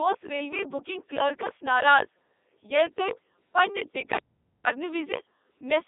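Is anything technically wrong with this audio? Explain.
Yes. The whole speech clip has been through a Codec 2 vocoder, and it also drops out completely once near the end.

Throughout, this low-rate digital-radio codec, here at 3.2 kbit/s, transmits only pitch, voicing, energy and a coarse spectral envelope. The decoder then rebuilds the voice from sine waves, so the original waveform never survives. The result is heavily robotic and buzzy. The speech is confined to a band of roughly 250 Hz to 3.7 kHz, and nothing at all sits above 3.8 kHz. A spectrogram shows neat harmonic stripes with a hard ceiling and empty upper bands.

From 4.18 s to 4.67 s the sound stops dead for about 480 ms. This is an audio dropout to silence, with no room tone or hiss in the gap. The likely cause is the input being lost for a moment, through a link failure or a brief mute, while recording carried on writing silence. 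Whatever was spoken there is gone. The waveform shows a flat line, and the spectrogram shows a dark vertical slab.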